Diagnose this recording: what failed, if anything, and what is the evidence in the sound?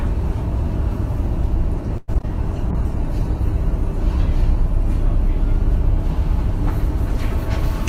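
Repeated packet loss (robotic sound), a network fault, runs from 1.97 to 2.25 s. Four holes, the longest 105 ms, are patched by stretching the preceding sound, so nearly half the span turns choppy with brief gaps. Plain dropouts would leave clean silences instead.

A call bitrate drop in the codec stage runs from 2.72 to 6.76 s. Sound turns rough, watery and dull, bottoming out for about 1.5 s, which fits the encoder falling from 48 to 16 kbps. Unlike a fixed low-pass filter, coarse, smeared texture accompanies the lost treble.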